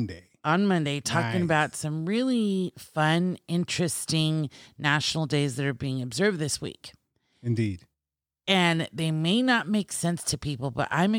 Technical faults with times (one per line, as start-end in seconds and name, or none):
none